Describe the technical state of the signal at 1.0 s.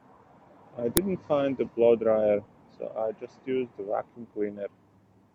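Right around 0.97 s there's an uninitialised buffer: a tiny block, which fits a 64-sample buffer, played out stale memory, giving a brief, loud crack.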